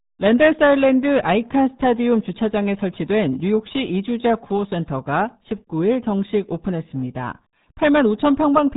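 Muffled, gargly speech runs from start to finish, with nothing heard above 3.8 kHz and heavy codec damage. This is the RealAudio 14.4 codec, a dial-up-era speech coder; the damage fits a bitrate around 8 kbit/s.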